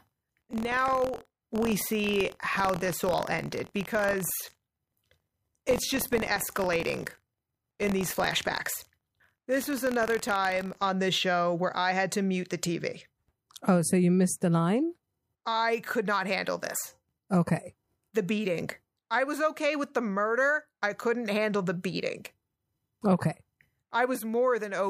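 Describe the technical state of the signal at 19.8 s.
At 19.8 s the speech signal is intact, with no audible fault at that moment.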